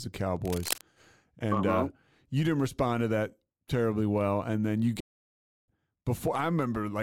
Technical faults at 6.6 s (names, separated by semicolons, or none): none